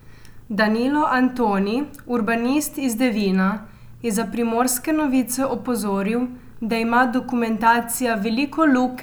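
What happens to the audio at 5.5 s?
Nothing goes wrong at 5.5 s; the speech carries on intact through that moment with no dropout, click or distortion.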